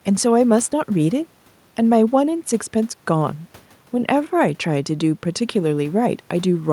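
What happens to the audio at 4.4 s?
Nothing goes wrong at 4.4 s; the speech carries on intact through that moment with no dropout, click or distortion.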